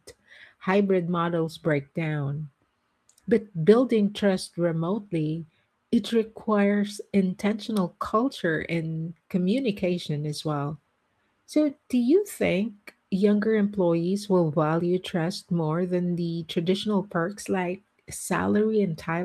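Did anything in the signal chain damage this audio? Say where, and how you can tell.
No, nothing in the signal chain stood out as damaging this speech on listening.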